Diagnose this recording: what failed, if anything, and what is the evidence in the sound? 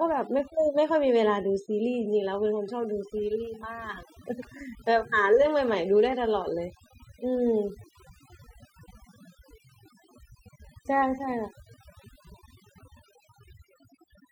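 Overdone noise removal from a noise reduction tool, throughout: lowered background with twinkling specks. Unlike codec smearing, the gaps between phrases drop low and break up into warbling specks.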